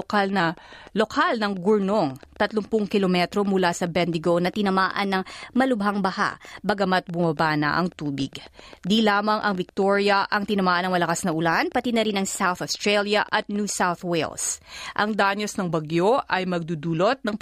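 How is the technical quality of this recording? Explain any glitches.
The recording is compromised by two faults: a steady click train over most of the speech, and repeated abrupt speed-and-pitch jumps.

A train of clicks runs from 0.02 to 13.7 s, about 7.4 per second at a regular pace, around a hundred in all and roughly as loud as the speech. It is likely interference or a faulty connection. It sounds like ticking that continues through pauses. On a waveform it shows as evenly spaced spikes, and on a spectrogram as thin vertical lines.

A drift correction step occurs four times, likely from clock-matching software resampling in one jump to refill or drain its buffer. The audio slows about 6% and drops about a semitone (−111 cents) at 0.40–0.98 s and 15.21–17.29 s. It speeds up about 6%, rising roughly 105 cents, at 4.47–6.81 s and 11.41–12.46 s. Each is heard as sudden detuning that snaps back. 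A spectrogram shows harmonics shifting as a block.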